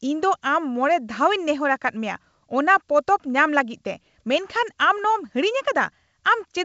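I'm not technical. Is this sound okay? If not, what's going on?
Yes, there's nothing wrong with this speech recording. It went through G.722 wideband telephone coding, which keeps more of the high range than an ordinary phone line, so it sounds fuller than a normal call, with at most a faint hiss in the upper range.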